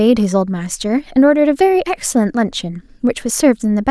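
Listening to this speech recording, nothing stood out as a technical problem.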